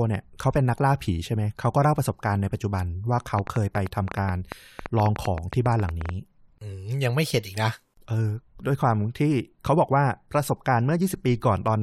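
From 3.39 to 6.10 s there's a train of clicks, around thirty of them at roughly 8.9 per second but unevenly spaced, ticking well above the speech, maybe 10 dB hotter. Likely interference from nearby gear or a faulty connection or power supply.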